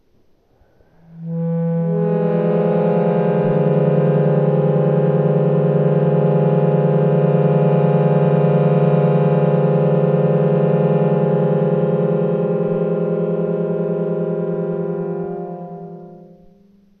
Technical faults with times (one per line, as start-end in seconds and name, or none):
none